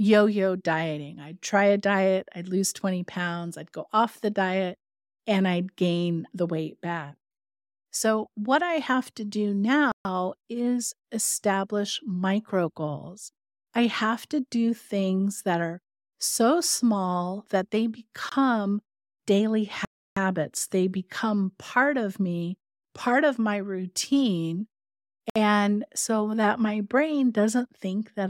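Four Bluetooth stalls cut the speech to silence: after "I have to do" at 9.92–10.05 s, after "so small that they" at 18.29–18.32 s, at 19.85–20.17 s, and before "so that my brain" at 25.30–25.36 s. Each is likely the headphones' buffer running dry while resent packets arrive. These are true gaps of 23 to 316 ms, not garbled concealment.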